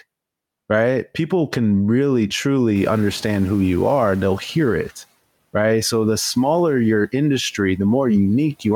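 From 2.75 s to 4.93 s the noise suppressor is catching up. Room noise jumps by about 18 dB around 3 s, the suppressor's estimate lags, and the noise floor comes through raised before sinking by about 9 dB over 2.18 s, a fading band on the spectrogram.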